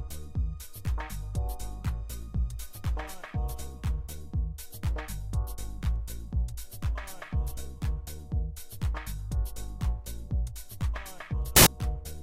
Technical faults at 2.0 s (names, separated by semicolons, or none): none